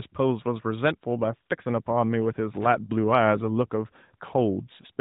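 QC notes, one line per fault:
2.54–2.66 s, loose connector crackle: a brief irregular burst of scratching and crackle as a worn contact rapidly makes and breaks the signal path.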